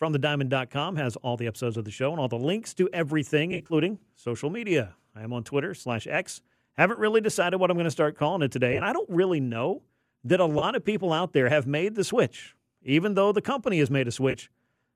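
Speech, marred by AAC frame loss with concealment. Short smeared, phasey patches occur at 3.52–3.74 s, 8.73–8.81 s, 10.59–10.64 s and 14.31–14.36 s. The decoder fills each gap from the last good spectrum. The worst patch loses 110 ms in brief bursts, which fits 10 ms frames from a likely low-delay AAC stream.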